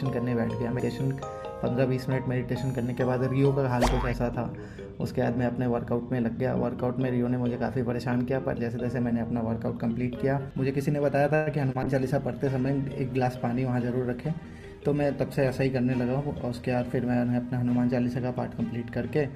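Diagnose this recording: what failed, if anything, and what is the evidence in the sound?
At 11.35 s the sound stretches into a fading buzz for 0.11 s, then resumes intact: likely a call audio freeze, delayed network packets draining the jitter buffer.

A brief smear from 11.72 to 11.77 s is short concealed packet loss. About 20 ms never reached the decoder, so the receiver extrapolated the preceding sound.

From 11.84 to 17.04 s the audio turns muffled and watery. This is a call bitrate drop: the bandwidth estimate fell and the Opus encoder went from 96 to 23 kbps.

Between 14.28 and 14.95 s the sound hurries at unchanged pitch, running at 114%. A jitter buffer speed-up removed pitch-period slices totalling about a tenth of a second.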